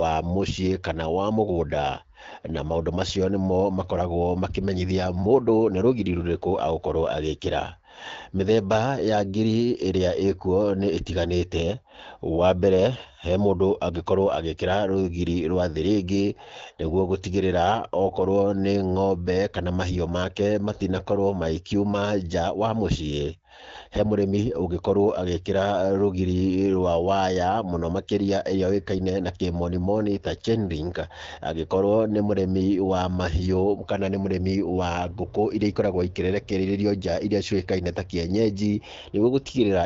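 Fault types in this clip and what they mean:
Nothing here counts as a fault: it's speech carried over an AMR wideband (HD Voice) link at 12.65 kbit/s, with nothing going wrong along the way.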